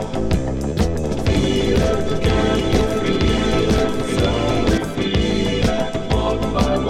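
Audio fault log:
1.04–4.78 s: doubled audio track. A second full-band copy runs about one second behind the original, roughly 5 dB quieter. It has no decay or room colour, and it starts and stops abruptly. It is likely a second capture through a slower path.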